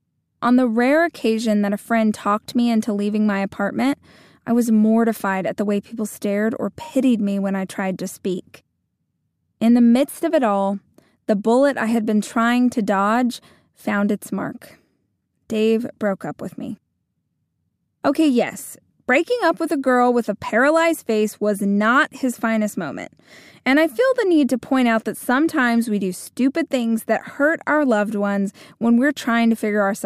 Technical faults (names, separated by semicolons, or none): none